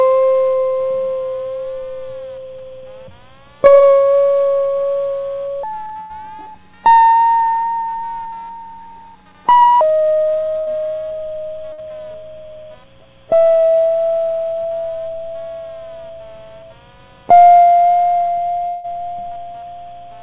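Throughout the clip, computer activity noise reaches the audio: load changes in the machine disturb the shared ground of the audio circuit and inject a buzz that pulses roughly 200 times a second. It sits well below the music, around 35 dB down, and rises and falls with the computer's activity rather than with the playing, so it reads as an electrical chatter laid over the track.

From 5.63 s to 9.81 s there is a section at the wrong speed, likely from the passage being played against the wrong clock. It runs 1.56 times too fast, and because speed and pitch move together, the music jumps up by roughly seven semitones, about a fifth higher, and sounds hurried and bright until normal playback returns at 9.81 s.

Four bursts of packet loss fall at 6.00 s, 7.07 s, 10.59 s and 11.73 s. Each time a short run of audio failed to arrive, and the receiver stretched the last sound to cover it, fading it as it went. 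The result is a brief held buzz or hiss, about 94, 50, 80 and 52 ms long. The music then resumes slightly further on, skipping 100, 60, 80 and 60 ms of material. At 7.07 s about 12 ms of extra sound also slips in around the patch.

At 18.68 s a long network dropout begins, most likely a stall in delivery. No new audio comes through for about 160 ms, and the receiver fills the entire gap with a fading continuation of the last sound instead of falling silent. At 18.86 s the music picks up again further along, with those 160 ms missing. Across the clip nothing is heard above 4 kHz, which fits a narrowband 64 kbps G.711 call path.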